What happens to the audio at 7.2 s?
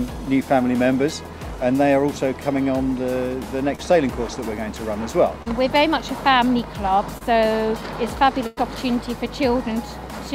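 Short concealed packet loss at 7.18–7.23 s: about 20 ms never arrived, so the decoder extended the preceding sound, giving a brief smear visible as blurred, flattened spectral streaks.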